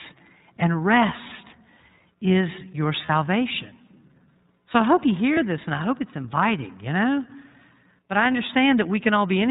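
The whole clip runs through the iLBC codec. Nothing above 4 kHz survives, so it sounds narrowband, and the speech has a plainly rough, slightly synthetic edge, which fits iLBC's 30 ms frame mode at around 13 kbps. At 3.06 to 3.10 s, just after "is your", and again at 5.34 to 5.38 s, between "I hope you" and "this and I hope", there are lost iLBC frames, each about 30 ms. The decoder fills the gap by repeating the last pitch cycle with some noise, so you get a brief buzzy held vowel before the voice snaps straight back.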